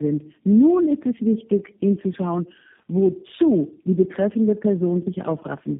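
From start to finish the speech carries tandem speech coding, and it sounds like it's been through more than one phone network. Everything is gone above about 3.7 kHz, so it's muffled, and on top of that there's a layered roughness and a warbly smear. That fits roughly three low-rate speech coders in a row, something like AMR-NB twice and then G.729A, with each one re-encoding the previous one's already damaged output.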